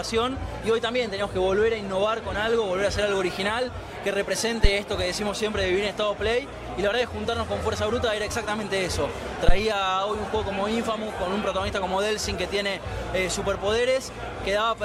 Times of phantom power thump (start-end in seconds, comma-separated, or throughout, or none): 4.64-4.70, 9.49-9.59